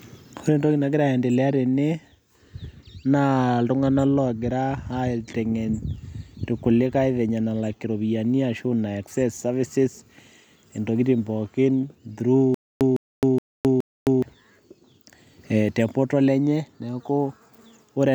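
A stutter with silent gaps runs from 12.54 to 14.22 s, just after "intokitin pookin through". A fragment about 156 ms long plays four times, each followed by 264 ms of dead digital silence, so it returns every 420 ms at a steady, mechanical pace. The likely cause is a playback or streaming stall, with each retry replaying the last buffered piece before running dry. The speech that belonged in that span is lost.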